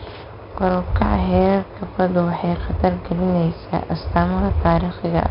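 From start to finish, the speech carries 4-bit ADPCM compression. Each sample is coded as a coarse 4-bit step from a predicted value, with the step size adapting as it goes. The error it leaves is a gritty hiss that rises and falls with the level. Here the damage is heavy. Loud syllables sound rough, and sharp onsets smear. Nothing sounds above 5.3 kHz, which gives a dull tone and points to a rate near 44 kbps.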